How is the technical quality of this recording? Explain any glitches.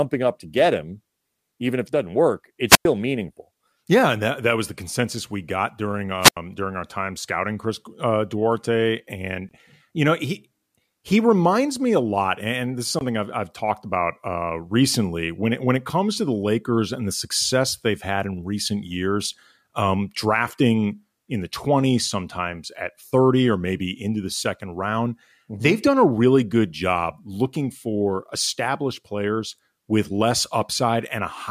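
The recording has two wireless microphone squelch dropouts. The first comes at 2.67 to 2.85 s, just after "if it doesn't work". The second comes at 6.21 to 6.37 s, between "consensus we got during" and "during our time scouting". The radio link fades and the receiver's squelch mutes the output. Each dropout has a brief burst of hiss, then a near-silent gap of about 102 ms and 83 ms respectively. After the gap, the speech returns.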